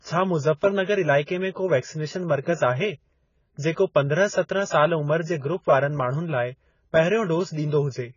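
Throughout the speech, the top end stops at about 7 kHz and the sound is dull and smeared, with a warbling, fizzy texture on sibilants. This heavy damage is likely AAC compression, and it fits AAC-LC at around 16 kbps, where the codec starves high bands and quantises coarsely. From 2.41 to 2.46 s, just after "में को वैक्सनेशन", a short hiss leads into the next attack, which sounds softened. This is pre-echo: the coding noise from that loud onset is spread back across the block, filling about 51 ms before it.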